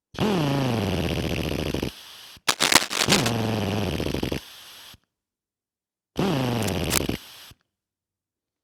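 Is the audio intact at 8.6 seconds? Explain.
Yes, the audio is intact at 8.6 seconds, with no dropout, click, distortion or other fault at that point.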